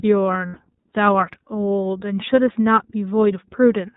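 A speech recording carried through the iLBC codec: band-limited below 4 kHz, with a plainly audible rough, synthetic texture consistent with the 15.2 kbps mode and 20 ms frames. Lost iLBC frames cause concealment gaps at 0.46–0.58 s, about 100 ms or roughly five frames, and 2.52–2.56 s, about one frame, each heard as a briefly held, buzzy repeated pitch cycle.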